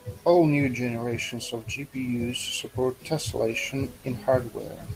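Listening closely to the speech recording, nothing stood out as a technical fault at any point.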